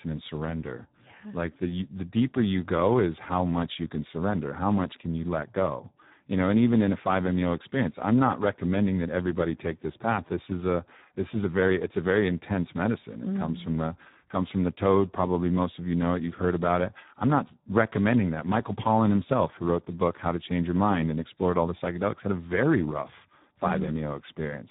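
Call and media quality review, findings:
Hoarse, noisy speech throughout, nothing above 3.8 kHz. Speex codec at a low setting, too few excitation bits, which fits about 8 kbps narrowband.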